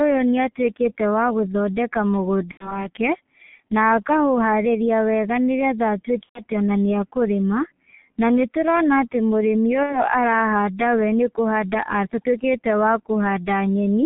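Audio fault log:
throughout: G.723.1 codec. The speech is muffled and hoarse with blurred consonants, cut off around 3.4 kHz; the steady coarseness fits a 6.3 kbit/s rate.
2.51–2.89 s, 6.23–6.43 s, 9.83–10.03 s: VoIP packet loss concealed by the speech codec. About 90, 120 and 60 ms of sound are lost and filled with fading sound stretched from the last pitch. Unlike a dropout, the speech stays weak afterwards.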